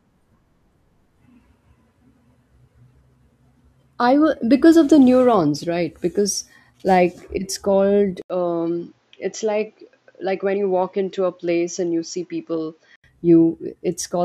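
From 8.22 to 13.04 s, after an 80 ms gap, the speech goes dull and quieter, with nothing above 7.6 kHz: likely an input switched to a poorer device.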